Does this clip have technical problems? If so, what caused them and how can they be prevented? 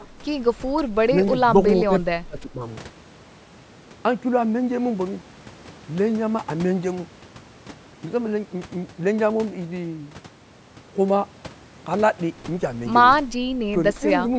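Yes. The voice drops in level three times: from 0.00 to 0.12 s by up to about 10 dB, from 0.68 to 0.81 s by up to about 5 dB, and from 2.24 to 2.62 s by up to about 10 dB, the longest dip. This is likely speech suppressed in double talk: with far-side audio playing on the loudspeaker while this side spoke, the echo canceller mistook the voice for echo and turned it down. A headset or an echo canceller with better double-talk detection prevents it.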